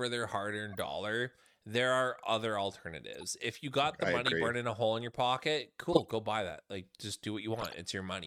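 Corrupt frames decoded at 0.73–0.81 s, 3.14–3.24 s, 5.93–6.11 s and 7.57–7.74 s break into this speech clip as brief chirps and bursts of noise. Each time, a handful of compressed frames arrived with flipped bits and the decoder played them anyway, so misread gains and codes put energy at wrong frequencies for as long as those frames last. The burst near 6 s is much the loudest, peaking at about -10 dBFS, while the one near 3.1 s is faint.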